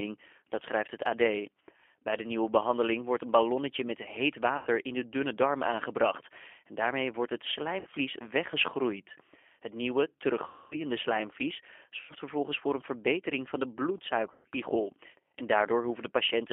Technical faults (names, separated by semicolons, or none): G.729 codec; VoIP packet loss concealed by the speech codec